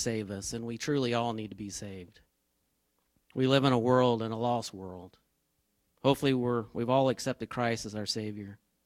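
A short recording of speech with no technical fault to point to. There is nothing here that needs a time or a cause.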